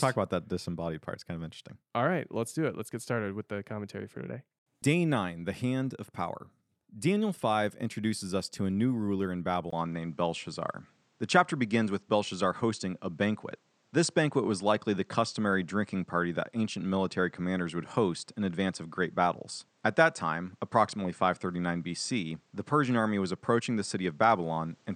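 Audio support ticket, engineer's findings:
Input switched to a poorer device at 9.70 s, likely: 20 ms gap, then nothing above 9 kHz, level shifted around 5 dB, faint new noise floor through to end.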